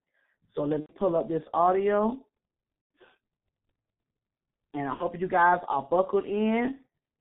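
Throughout, the speech is muffled and hoarse, with smeared consonants and no content above 4 kHz. This fits the G.723.1 codec at roughly 6 kbit/s. VoIP packet loss concealed by the speech codec hits at 0.80 to 0.95 s before "up this audio", at 2.81 to 2.90 s after "up this audio", and at 4.94 to 5.05 s before "you guys are". Each gap is filled with stretched sound that fades, consistent with 30 ms frames being extrapolated.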